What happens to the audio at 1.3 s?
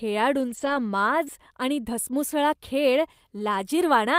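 Just before "आणि धसमुसळा खेळ", from 1.25 to 1.28 s, there is a short concealed packet loss. About 20 ms of the call did not reach the decoder in time. The receiver bridged roughly 11 ms of that hole by extending the preceding sound, continuing its pitch if voiced or substituting shaped noise if not, before fading back into real audio. The result is a brief smear or wobble, and a short consonant can drop out.

Overlapping the same span, from 1.26 to 1.28 s, is a lost packet rebuilt from error correction. One 20 ms packet went missing, but the following packet carried a low-bitrate Opus in-band FEC copy of it, and the decoder played that copy instead of leaving a gap. This keeps the audio continuous but makes that stretch rougher and noisier than its surroundings. If the call is full-band, the top end also dips there, because the copy lacks those frequencies and the decoder only estimates them.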